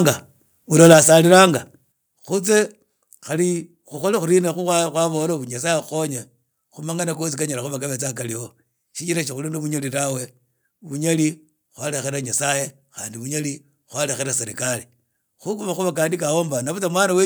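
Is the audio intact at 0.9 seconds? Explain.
No. From 0.8 to 1.33 s the loudest syllables carry a harsh, crackling edge, with their peaks flattened rather than rounded. This is microphone overload: the input is driven about 5 dB past the converter's ceiling, so a small fraction of samples are cut off at the converter's limit, likely because the microphone input volume was set too high.

At 0.93 s, right inside that distorted stretch, the sound and its background drop abruptly by about 4 dB in a single step. This is a microphone volume stepped down: the call software likely detected the clipping and lowered the device's input gain at once, which produces a sudden level change rather than a smooth fade.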